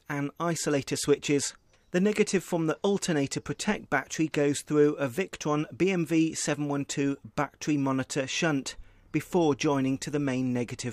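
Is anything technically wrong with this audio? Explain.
No, nothing technically wrong turns up on listening.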